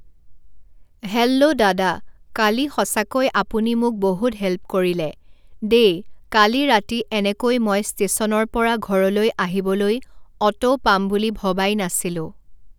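Nothing is technically wrong with this speech recording.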